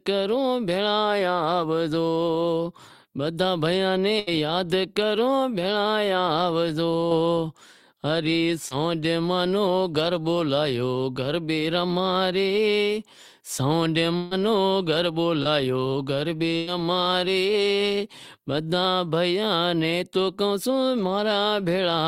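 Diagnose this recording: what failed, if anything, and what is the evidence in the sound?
Held buzzes and fading hisses around 4.19 to 4.29 s, 14.17 to 14.33 s and 16.57 to 16.69 s, after which the speech jumps ahead. This is a burst of packet loss in the network. The receiver stretched and faded the last sound across gaps of 72, 142 and 97 ms, so 80, 140 and 100 ms of audio is gone.

Brief smears or wobbles at 7.09 to 7.13 s, 8.69 to 8.73 s and 15.43 to 15.47 s. These are short concealed packet losses, also network-side. About 20 ms failed to arrive each time, and the decoder patched the hole by extending the preceding sound before blending back.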